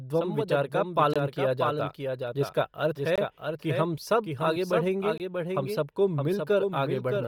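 Throughout, the speech carries a dry second copy trailing roughly 0.7 s behind at about 5 dB lower, with no room colour; this is likely a doubled audio track from a second, slower capture path. The whole clip also has a breathy, grainy edge, with the upper spectrum replaced by noise, likely from heavy Bluetooth LC3 compression in 10 ms frames, consistent with a low bitrate around 32 kbps. Hard-edged holes about 21 ms long fall every 2 s: from 1.14 to 1.16 s between "संवदध्वं विचार का" and "किया जाता", from 3.16 to 3.18 s just before "कि हम सब आगे", and from 5.18 to 5.20 s after "हम सब आगे बढ़ेंगे". These are gaps between chunks, where silence was left at each join of 2 s blocks.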